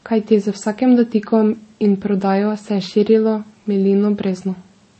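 Across the whole speech clip, nothing sounds above 8.3 kHz, and two textures of coding damage overlap rather than one: swirly smearing plus a separate grainy warble. That stacking marks transcoding between lossy codecs, likely a low-rate MP3 re-encoded as Vorbis.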